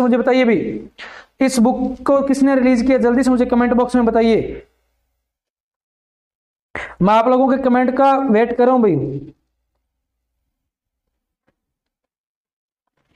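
No technical faults can be heard anywhere in the audio.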